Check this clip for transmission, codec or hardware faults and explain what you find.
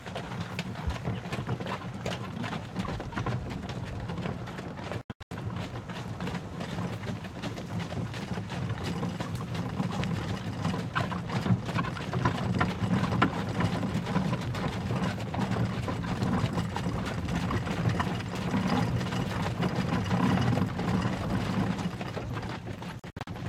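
Two short gaps break up the sound, at 5.01 to 5.31 s and at 22.99 to 23.27 s. Both fit a Bluetooth dropout, where packets most likely failed to reach the headphones in time and were discarded. Each gap is a cluster of brief silences rather than one hole: about 256 ms lost over 0.3 s in the first (longest run 85 ms) and 171 ms over 0.28 s in the second (longest 64 ms). The sound stutters and picks up further along, as though it kept playing. A waveform shows flat-line segments with sharp edges, and a spectrogram shows narrow, full-height vertical blank strips.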